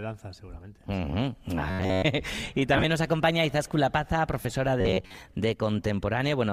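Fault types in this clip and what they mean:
Robotic sound from repeated short buffers: From 1.70 to 2.06 s and again from 4.81 to 5.17 s the sound takes on a rigid, metallic buzz fixed at 93.8 Hz, loosely tracking the underlying audio. The likely cause is playback starved of fresh data, with the output looping its most recent fragment of roughly 10.7 ms, one period of the buzz, while most of the real material in those spans is skipped.
Lost LE Audio frames: Between 2.74 and 2.84 s about 60 ms of audio drops out in scattered pieces across 100 ms, the longest gap around 20 ms. At 4.42 to 4.45 s a further 30 ms is lost. The decoder conceals each gap by reusing the last spectrum with randomised phase, so tonal content briefly smears into a noisy wash before normal decoding resumes. The gap lengths fit 10 ms LC3 frames.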